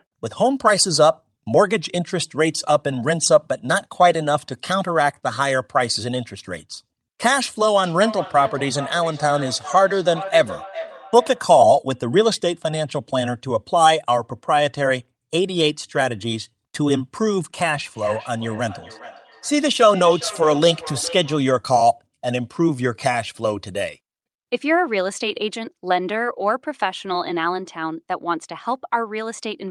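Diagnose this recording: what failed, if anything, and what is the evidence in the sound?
Feedback echo between two devices, in call processing: from 7.84 to 11.59 s and 17.84 to 21.51 s, the speech recurs about every 0.4 s, at about 13 dB and 16 dB below the talker. A second device replays the signal, and this device's echo canceller never saw it. Each pass sounds thinner and more ringing, unlike a single room reflection.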